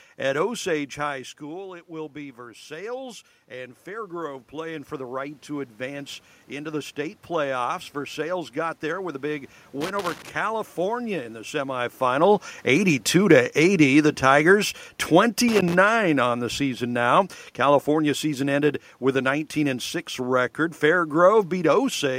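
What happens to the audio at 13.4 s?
At 13.4 s the automatic gain control is falling: having judged the input too loud or its background noise too strong, it eases its gain down over 12.07 to 14.59 s, by about 3 dB. The speech sinks gradually, and the room's background noise drops with it.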